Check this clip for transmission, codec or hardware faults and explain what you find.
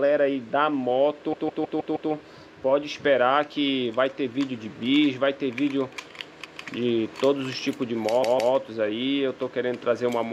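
There are repeated frames at three points. A block of about 157 ms, consistent with a run of six compressed frames, replays five times from 1.32 to 2.11 s, once at 6.44 s, and twice from 8.22 to 8.53 s. Each block plays back intact with nothing missing, which sets it apart from a dropout.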